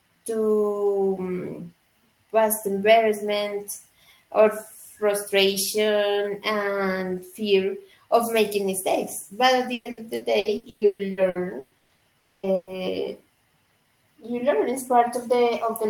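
From 9.73 to 12.04 s the speech turns choppy, with pieces dropping out. This is repeated packet loss (robotic sound): twelve gaps, the longest 120 ms, each patched by stretching the last sound, so concealment covers about 44% of the stretch.

At 12.19 s the last sound is held as a fading buzz or hiss that carries on for about 240 ms, never falling to silence, before the audio returns at 12.46 s with that part gone. This most likely reflects a long network dropout, with the receiver extending the last sound across the hole.

From 12.55 to 12.70 s there is another, shorter held-over sound of about 120 ms, after which the speech resumes further along. This is a burst of packet loss: a few packets in a row went missing, and the receiver filled the gap by continuing and fading the preceding sound.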